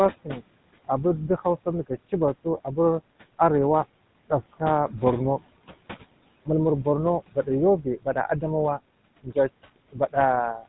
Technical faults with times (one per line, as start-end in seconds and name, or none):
0.00-10.69 noise suppressor artifacts
0.00-10.69 GSM full-rate codec